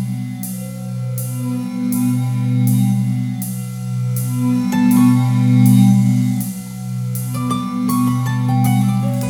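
Nothing in the signal points to a technical fault at any point in the recording.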